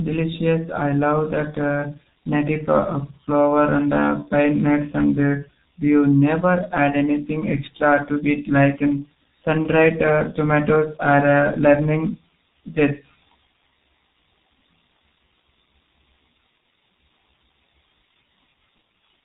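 From start to finish, the speech carries heavy G.723.1 codec damage. This early internet-telephony coder squeezes audio into 30 ms frames at a very low rate. The sound fits a bitrate near 6.3 kbit/s. Nothing above 4 kHz survives, so the speech is muffled and dull. The coder's voice model updates slowly, which leaves a hoarse, rough quality. Consonants smear together and lose their edges.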